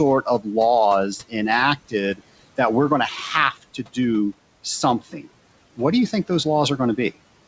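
The noise suppressor mistook parts of the speech for background and turned them down, leaving brief stretches swallowed and faint. This speech cut by the noise suppressor occurs at 0.22 to 0.47 s, up to about 15 dB down, and at 3.53 to 3.97 s, just after "that we're going to", up to about 12 dB down. Both are heard over room noise about 20 dB below the speech, through a call path with nothing above 8 kHz, which fits a wideband codec such as G.722.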